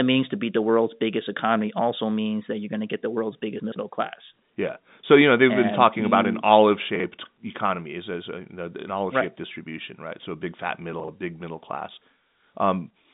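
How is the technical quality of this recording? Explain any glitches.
Three brief glitches interrupt this telephone-band speech, which carries nothing above about 3.8 kHz, consistent with G.711 A-law coding. The glitches are chunks out of order: at 3.6 to 3.76 s after "to get the world's", 6.96 to 7.04 s between "been talking about an" and "economy as as", and 11.0 to 11.08 s between "a big fat" and "a big middle class". In each case a block of audio about 40 ms long arrived late and played after the blocks meant to follow it. It was three blocks late the first time and one block late in the other two. No audio is lost, but the order is wrong and the splices leave hard joins, so each spot sounds briefly jumbled.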